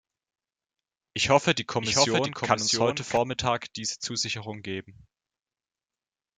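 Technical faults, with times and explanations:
1.81–3.17 s, doubled audio track: a second capture path or an edit has likely mixed in a copy running about 0.7 s late, about 5 dB quieter. The speech overlaps itself with a dry, full-band duplicate that has no decay and cuts in and out abruptly.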